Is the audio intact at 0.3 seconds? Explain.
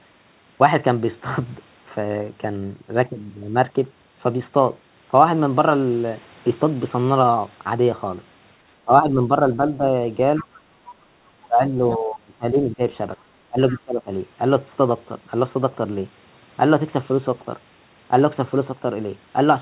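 Yes, at 0.3 seconds the speech is intact, with no dropout, glitch or distortion, only the narrowband sound of the call path, which carries nothing above 4 kHz.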